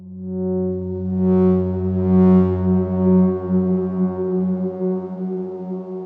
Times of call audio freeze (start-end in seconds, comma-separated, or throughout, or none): none